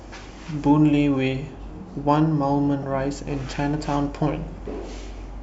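At 2.82 to 2.84 s a corrupt frame decoded produces an error peaking around -20 dBFS, and at 4.52 to 4.54 s a fainter error near -35 dBFS follows, sounding like a frame or two. Damaged bits made the decoder misread gains and codes, so energy landed at the wrong frequencies for about the length of each damaged frame. Unlike a dropout, it adds tonal junk rather than silence, and unlike a click it lasts about 20 ms.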